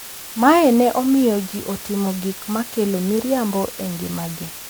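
From start to finish the speech carries low bit depth with dither: about 7 bits, leaving a steady, even hiss roughly 25 dB below the signal. On a spectrogram it appears as a flat noise floor at every frequency, and on the waveform as fuzz that never drops out.

Throughout, generation loss makes the speech sound swirly, hollow and smeared, with soft attacks. The likely cause is MP3 at 128 kbit/s encoded around ten times. A spectrogram shows scattered holes, blurred onsets and nothing above 20.9 kHz.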